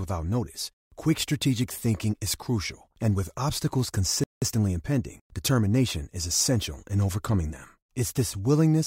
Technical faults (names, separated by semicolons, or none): playback stall; time-compressed catch-up